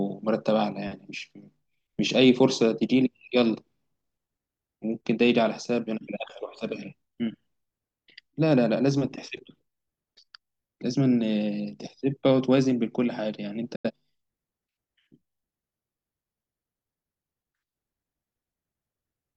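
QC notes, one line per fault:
13.75–13.91 s: digital broadcast dropout. The speech fades out over 8 ms and drops to silence, with 85 ms of programme missing, which fits two lost frames. The receiver muted on missing or corrupt data and resumed once valid frames arrived.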